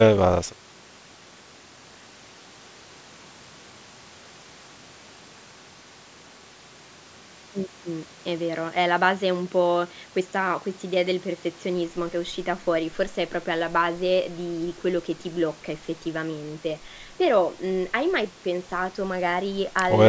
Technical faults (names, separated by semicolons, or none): none